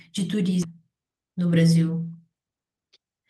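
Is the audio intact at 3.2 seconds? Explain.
No, the speech sounds hurried but keeps its pitch from 2.5 to 3.22 s: a jitter buffer speed-up at 110% trimming about 70 ms of pitch periods to cut built-up delay.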